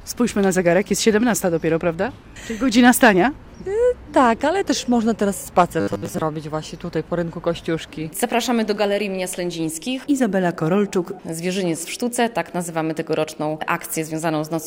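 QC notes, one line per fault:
5.81–6.22 s, robotic sound from repeated short buffers: a rigid metallic buzz locked at 100 Hz, likely from a 10 ms chunk replayed while new audio arrived late, so about half is repetition. Unlike a dropout, nothing falls silent.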